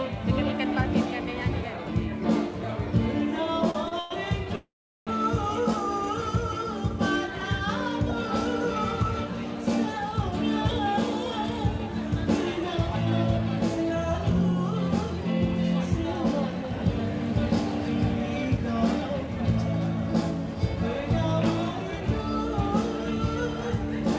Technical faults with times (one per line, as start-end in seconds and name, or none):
3.44-4.12 repeated stalls (stutter)
4.55-5.09 call audio freeze
10.31-12.57 jitter buffer speed-up
13.84-17.14 jitter buffer speed-up
18.42-23.55 jitter buffer speed-up